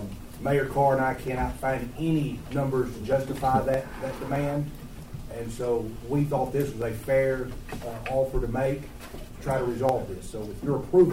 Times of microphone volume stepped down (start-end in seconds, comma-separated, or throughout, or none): none